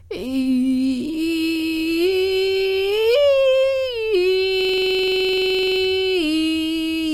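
This music clip has a system hang loop from 4.61 to 5.80 s. The system froze while the hardware kept replaying one 42.7 ms slice at 23.4 Hz, which fits a 2048-sample ring buffer. The result is a machine-gun stutter that shows as identical repeating waveform blocks and evenly spaced vertical spectrogram stripes.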